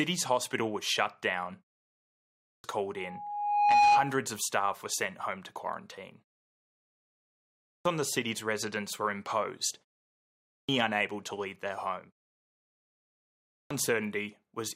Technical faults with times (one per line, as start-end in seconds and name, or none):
2.04-2.64 clipped start after a pause
2.97-4.20 loudspeaker feedback squeal
7.29-7.85 clipped start after a pause
10.12-10.69 clipped start after a pause
13.16-13.70 clipped start after a pause